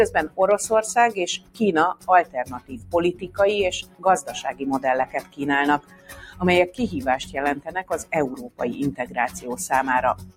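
A noise suppressor built for speech has been left running on this non-speech audio, and it treats steady, sustained content as noise. Across the whole clip the level swings by roughly 15 dB as the suppressor keeps re-deciding what to keep, so the sound pumps and thins while attacks mostly come through. Unlike a compressor's pumping, the dips follow how steady the sound is rather than how loud, and they hollow out sustained tones and tails rather than ducking everything after a peak.

Sound cut by the noise suppressor is clearest at 1.37 to 1.61 s, 1.94 to 3.38 s, 3.82 to 4.61 s, 5.06 to 5.40 s, 5.79 to 6.79 s, 7.22 to 8.60 s, 9.01 to 9.41 s and from 10.15 s to the end. In these spans, held or decaying material sinks by about 15 to 16 dB, and by about 8 dB at 9.01 s. This is not a dropout, because the sound fades and smears down instead of vanishing abruptly.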